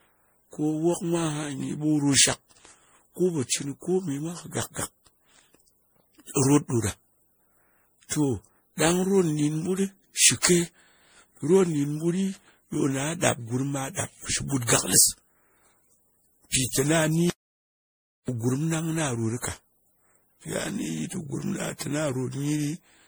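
From the first second to the end, the speech has a swirly, hollow, smeared quality with softened consonant attacks. This is generation loss, likely from the audio being decoded and re-encoded around ten times with MP3 at a rate near 64 kbit/s. Each pass quantised the signal on a shifted frame grid, so the errors piled up. A spectrogram shows a ragged, holed upper spectrum that flickers from frame to frame, with transients smeared across time.

At 17.30 s the speech cuts out abruptly and returns at 18.28 s, leaving a gap of about 0.98 s. This is an audio dropout to silence, likely caused by the input being lost while the recorder kept writing zeros. Nothing remains in the gap, not even room tone, and whatever was spoken there is gone. On the waveform the trace drops to a near-flat line with hard edges on both sides. The spectrogram shows a nearly blank vertical band.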